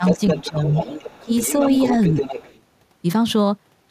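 From the very start until 0.6 s, there is speech suppressed in double talk. The talker's level dips in patches, adding up to roughly a third of a second, and falls by about 10 dB at its deepest. Both ends were likely talking at once, so the echo canceller could not tell the talker from the loudspeaker echo and pulled everything down.

From 0.05 s to 2.61 s, the other side's voice leaks through. A second voice sits only a little below the talker, around 5 dB quieter. The device is likely playing the far end on a loudspeaker, and the canceller is failing to strip that sound from the microphone.

Between 1.21 s and 1.31 s, the talker is suppressed again. This dip is brief, about a tenth of a second, but much deeper, roughly 20 dB. Overlapping talk is likely again causing the canceller to clamp down.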